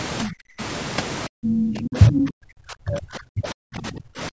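From 0.25 to 0.61 s the speech sinks by roughly 35 dB, then recovers. From 1.27 s to the end it dips again, by as much as roughly 40 dB, in a gated, uneven way. This is speech suppressed in double talk. The echo canceller, likely confused by both sides talking at once, turned down the talker along with the loudspeaker echo. Unlike a network dropout, the loss tracks the other party's activity rather than cutting cleanly.

Within that stretch, from 1.47 to 1.66 s and again from 1.82 to 2.27 s, a second voice pokes through. This is the other side's voice leaking through, likely residual loudspeaker echo the canceller failed to remove. The first burst is about as loud as the talker, and the second is about 5 dB louder. The whole clip stays within the normal call band, with nothing above 8 kHz.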